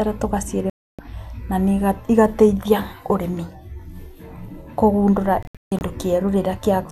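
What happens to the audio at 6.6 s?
Nothing goes wrong at 6.6 s; the speech carries on intact through that moment with no dropout, glitch or distortion.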